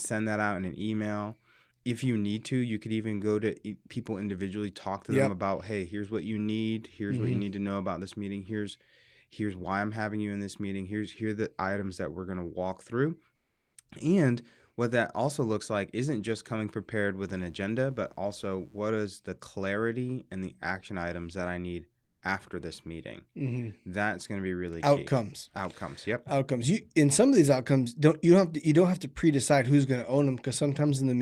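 At 13.35 s, just after "walk through", the room background gives way for 0.4 s to a smooth, featureless hiss about 3 dB quieter than the real ambience. The same flat texture returns from 22.03 to 22.19 s, between "items that I need" and "after this meeting", this time about 2 dB louder. Both gaps are comfort noise in place of the background. The likely cause is discontinuous transmission in the codec: the sender stopped sending audio during these pauses, and the receiver filled them with synthetic noise that only roughly matched the background's level and detail.

From 17.19 to 18.84 s, between "isn't just coming prepared" and "is the clarity and", a steady, raspy mains buzz rides under the sound. It is faint, sitting well below the speech. The buzz is built on 60 Hz: sharp switching spikes, twice per mains cycle, leaked from a dimmer, rectifier or unshielded cable and spread harmonics into the upper frequencies, which gives the buzz its gritty edge.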